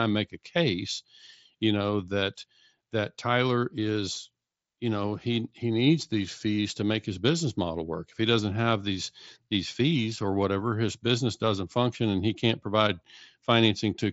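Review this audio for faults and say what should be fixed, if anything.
Nothing needs fixing: the speech has the band-limited sound of a wideband Bluetooth headset link carried by the mSBC codec, with content ending near 7.7 kHz and only a light grain from the coding, as expected for that path.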